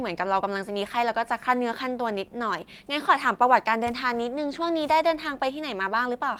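No technical faults can be heard anywhere in this speech recording. There is no point in the timeline that calls for comment.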